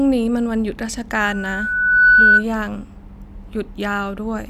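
From 1.15 s to 2.44 s a steady 1.5 kHz tone swells over roughly a second into a piercing whistle, some 15 dB above the speech. This is loudspeaker feedback squeal: the microphone caught its own loudspeaker, and at 1.5 kHz the loop gain exceeded one.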